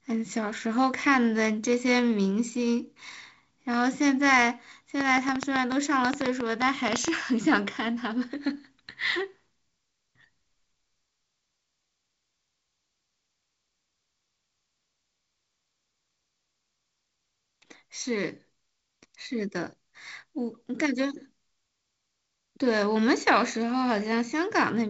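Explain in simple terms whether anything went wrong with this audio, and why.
A train of clicks runs from about 5.0 to 7.1 s: roughly twenty sharp, alike ticks at around eight per second, unevenly spaced and loud over the speech. Something kept injecting a pulse, likely electrical interference or a faulty connection or power supply.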